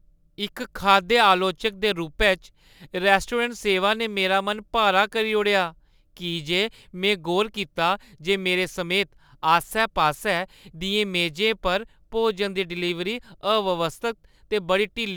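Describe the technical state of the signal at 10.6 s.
At 10.6 s, as throughout the clip, sample clock jitter of a few microseconds mistimes samples, adding hiss and roughness roughly 30 dB below the speech, strongest on loud, bright sounds.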